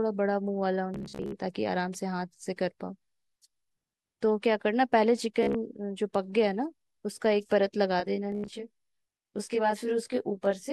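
Bluetooth stutter occurs three times. From 0.94 to 1.32 s, about 0.25 s of sound drops out across 0.38 s, with the longest gap 58 ms. From 5.43 to 5.55 s, 87 ms is lost over 0.12 s, with the longest gap 44 ms. From 8.32 to 8.53 s, 145 ms is lost over 0.2 s, with the longest gap 87 ms. Each time the receiver replays its last short slice until fresh data arrives, which produces a buzzing, machine-gun flutter before the sound jumps ahead. On a waveform this looks like identical short cycles repeated back to back. On a spectrogram it shows as vertical striping in which the same spectral slice repeats.

Channel delay (comb filtering) runs from 8.00 s to the end. One channel lags the other by roughly 20 ms, and summing them to mono cancels their shared content at evenly spaced frequencies, starting near 30 Hz and recurring about every 50 Hz. The sound turns rough and slightly doubled. On a spectrogram, fixed horizontal dark bands appear at regular intervals, and the third stutter falls inside this section.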